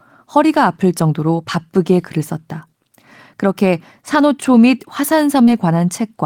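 At 5.45 to 5.49 s a short concealed packet loss briefly smears the speech. About 20 ms of audio arrived too late, so the decoder extended the preceding sound to bridge the gap and blended back. Unlike a hard dropout, there is no silence or sharp click.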